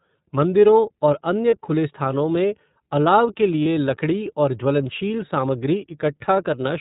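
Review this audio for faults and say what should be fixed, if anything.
The iLBC codec shapes the whole speech recording. Nothing above 4 kHz survives, and the voice has a rough, slightly synthetic grain, plainly audible, consistent with its 13.33 kbps, 30 ms frame mode. Unlike a simple low-pass filter, it also adds that coarse, buzzy texture. Using a wideband codec would prevent it.

Lost iLBC frames appear at 1.50–1.53 s and 3.63–3.66 s, each about 30 ms, which fits one missing frame. The decoder fills the hole by repeating the last pitch cycle with noise, so you hear a brief held, buzzy vowel rather than the silence of a plain dropout, and the voice recovers immediately. Protecting the network path against packet loss would prevent this.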